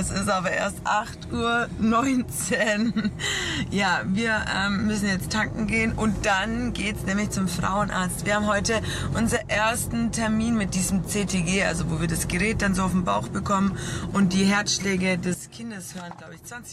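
At 9.37 s the level drops by about 8 dB in a single step, holding until 9.51 s, and at 15.34 s it falls by about 12 dB through to the end: a sudden gain jump, likely a gain change applied without a ramp, shifting sound and noise floor together.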